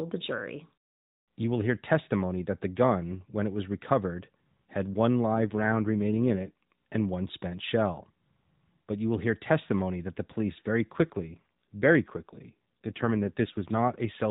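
At 5.34 s and again from 10.96 to 13.96 s there's an AMR rate drop. The speech gets rougher and more synthetic, with a buzzy edge, until 6.63 s the first time. The band doesn't narrow and nothing drops out. The sound points to the AMR-NB coder being pushed down from about 12.2 to 5.9 kbps, spending fewer bits on the voice itself, then returning to its usual lightly coded narrowband character.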